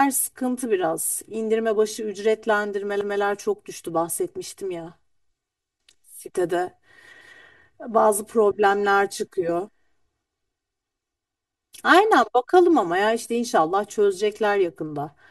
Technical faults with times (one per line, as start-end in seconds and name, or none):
0.00-15.31 channel delay (comb filtering)
3.01-3.21 overlapping chunks
7.21-7.41 overlapping chunks
11.41-11.61 overlapping chunks